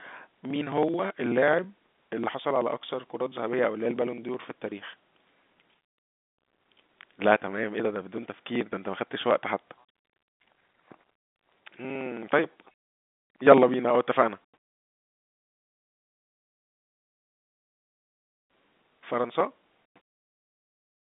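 Regular ticks run through the speech from 0.07 s to 20.92 s, one every 54 ms, hundreds in all, over the narrow telephone band of G.711 coding. These are periodic USB or driver dropouts: something stalls the audio path at that interval, skipping around 10 ms each time.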